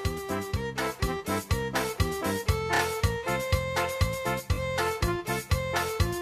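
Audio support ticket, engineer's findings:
Repeated frames: stutter at 2.74–2.80 s (30 ms block heard twice more) and 4.53–4.58 s (20 ms block heard twice more). Likely the encoder/transport rewrote the frames. Audio repeats rather than drops out, so it is not packet loss.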